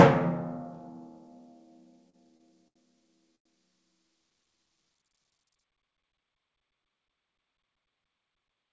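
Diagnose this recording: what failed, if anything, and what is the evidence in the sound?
Four short stalls from late packets occur in the network and jitter buffer stage. They fall at 2.10 to 2.15 s, 2.37 to 2.42 s, 2.68 to 2.78 s and 3.36 to 3.47 s. Each time the music hangs on one sound with a slight buzz or dip, for 34, 25, 78 and 99 ms. A packet was late and the buffer ran dry. The receiver stretched the last sound, then resumed where it stopped. Nothing is lost, but each stall adds delay.

A jitter buffer speed-up follows, also in the jitter buffer, from 5.73 to 6.34 s. The music rushes at 108% speed while the pitch holds. The tempo lurches forward and loses its steady pulse. The buffer had built up extra audio after the earlier stalls. To trim that delay, the receiver cut many short pitch-period pieces in a row, about 50 ms in total. Through the G.722 call path the band stops at 8 kHz.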